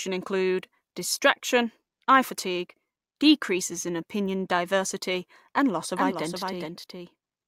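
From 5.96 s, after "opinion diversity and loss", a doubled audio track runs to the end: a second copy roughly 0.4 s late and about 5 dB quieter, likely from a slower capture path.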